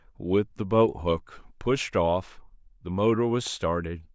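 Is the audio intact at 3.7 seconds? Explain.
Yes, the speech at 3.7 seconds is intact, with no audible dropout, click, distortion or other disturbance at that moment.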